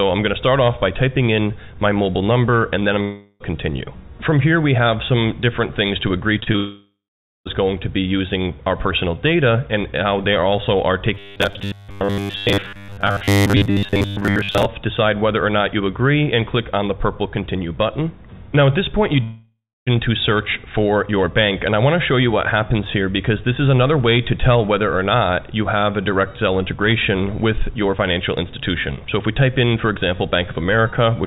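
A long network dropout at 3.02 to 3.42 s is the first fault. The stream likely stopped arriving for about 380 ms, and the receiver bridged almost the whole gap by extending the last sound as a fading buzz or hiss rather than going silent. The audio then resumes further on, with that stretch gone. Through all of this, the G.711 A-law call path keeps everything below 4 kHz, so nothing above that band is heard.

Short concealed packet loss follows at 6.40 to 6.44 s, 6.44 to 6.48 s and 6.52 to 6.56 s. Each time, about 20 ms of the stream missed the decoder, and the gap was filled by continuing the preceding sound before blending back. The result is a quick cluster of small smears and wobbles, a stutter just before the next gap.

The second long network dropout runs from 6.56 to 7.47 s and follows straight on from that cluster. Roughly 900 ms went missing. The concealment buzz or hiss trails off, and then about 480 ms of silence is left before the audio returns past the lost section.

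Robotic sound from repeated short buffers covers 11.15 to 14.66 s. New audio likely arrived too seldom, so the playback kept looping its latest fragment of about 10 ms while real material was skipped. The looping imposes a fixed 100 Hz buzz, a hard metallic drone. Only the rough outline of the underlying sound survives beneath it.

The third long network dropout, at 19.23 to 19.88 s, loses about 640 ms. A fading fill covers the start, then roughly 280 ms of silence remains before the sound picks up again, with that section missing.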